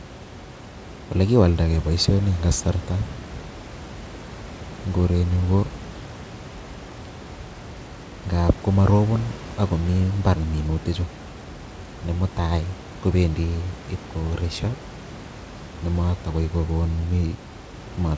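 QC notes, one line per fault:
No faults heard.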